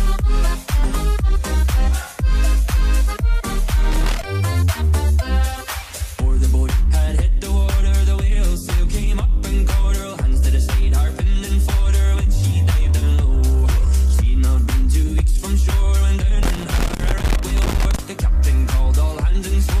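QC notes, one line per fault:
3.92–4.24 s: loose connector crackle, a short irregular burst of scratchy crackle as a worn contact makes and breaks, chopping the signal.
16.43–17.99 s: loose connector crackle again, longer this time, with the contact flickering on and off.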